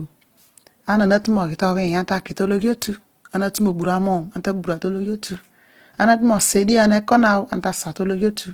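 Throughout, likely Opus compression starved of bits, fitting about 16 kbps in music mode, leaves the speech plainly rough, grainy and noisy despite full bandwidth.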